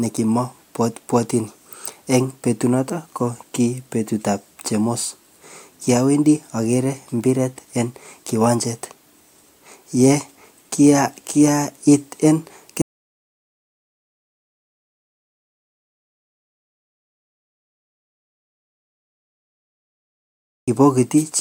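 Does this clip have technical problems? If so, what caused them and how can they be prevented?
Yes. An audio dropout to silence runs from 12.82 s to 20.68 s, about 7.9 s of silence, likely from lost input. Secure connections and monitor input levels during recording.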